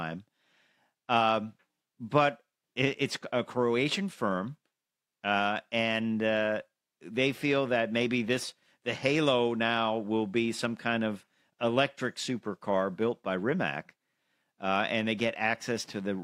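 Nothing goes wrong anywhere in this bit of speech, so there's no technical fault to point to at any moment.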